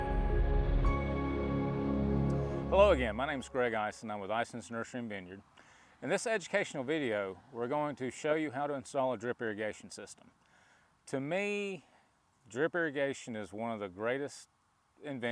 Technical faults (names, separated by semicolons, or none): none